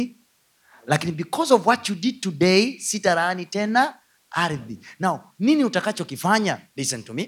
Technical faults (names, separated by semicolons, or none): none